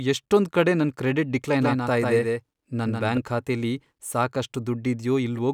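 Speech with a doubled audio track from 1.62 to 3.18 s: a second copy trails by about 150 ms, roughly 5 dB quieter, starting and stopping abruptly without echo-like decay, likely from a slower capture path.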